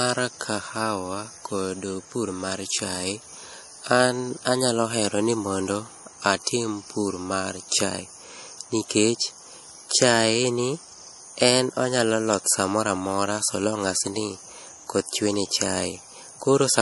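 Speech with MP3 compression artefacts throughout: the treble stops dead at about 11.5 kHz, and weak detail swirls and chirps on s sounds. A fixed shelf plus warbling sets it apart from plain low-pass filtering, and the damage fits a low bitrate around 48 kbps, likely from an MP3 encode.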